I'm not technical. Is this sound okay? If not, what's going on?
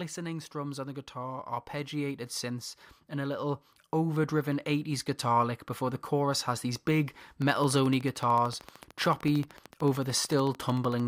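No, there are two problems. From 0.52 to 6.08 seconds there's automatic gain rising: the recording's level control decided things were too quiet and slowly turned itself up, so the voice and the background noise both swell louder together, just before "has these big".

Then, after "has these big", from 7.42 to 11.01 seconds, there's a train of clicks: a steady ticking, about 13 clicks every second, around fifty in all, sitting on top of everything, even the pauses. It's likely interference from nearby equipment or a faulty connection or power supply.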